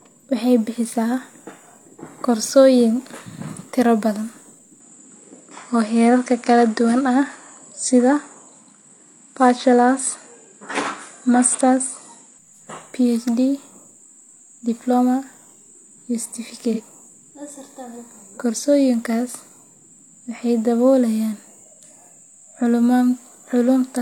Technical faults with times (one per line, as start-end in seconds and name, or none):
4.80-12.38 input switched to a poorer device
16.73-16.81 AAC frame loss with concealment